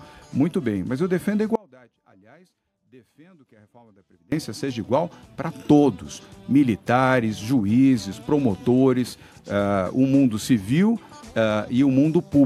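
Audio dropout to a faint residue, 1.55 to 4.32 s: the sound abruptly sinks to a faint leak about 30 dB down, likely from a broken feed into a still-live path.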